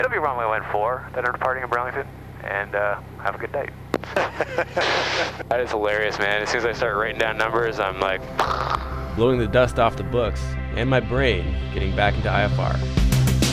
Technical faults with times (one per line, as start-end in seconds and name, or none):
none